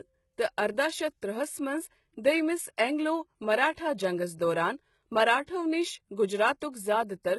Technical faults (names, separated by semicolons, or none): HE-AAC compression; pre-echo